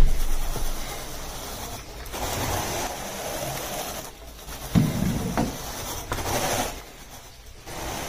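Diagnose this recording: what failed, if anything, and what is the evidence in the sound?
The sound abruptly drops to about 6 dB quieter from 2.87 to 4.47 s, then again from 6.81 to 7.66 s, snapping back to full level each time with no fade. This is the signature of one channel dropping out, most likely an intermittent connection in the analogue wiring of one stereo leg. With one side gone, the mono sum keeps only half of the shared content, hence the 6 dB step.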